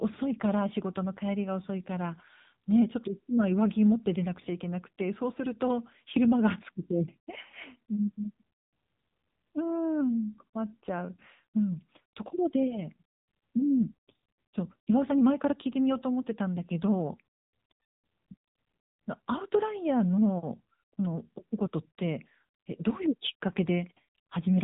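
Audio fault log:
Throughout, AMR narrowband mobile codec: the speech is squeezed into the old phone band, with nothing getting through above 3.8 kHz, so sibilants go dull and the whole thing sounds boxed in. The damage is plainly audible. There's a buzzy, synthetic edge because the codec rebuilds the voice from a vocal-tract model driven by a handful of pulses per short subframe, at the 7.95 kbps mode.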